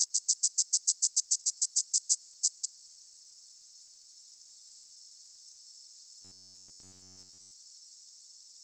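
From 1.19 to 5.57 s, repeated packet loss (robotic sound) chops the audio: over twenty holes, the longest 120 ms, are patched by stretching the preceding sound, covering about a quarter of the span. A spectrogram shows smeared, flat-topped blocks breaking the normal texture.

Between 6.22 and 7.52 s, the sound collapses into a rigid metallic buzz at 93.8 Hz. The likely cause is robotic sound from repeated short buffers, with roughly 10.7 ms being looped for most of the stretch. The waveform shows near-identical periodic cycles, and the spectrogram shows evenly spaced harmonic lines.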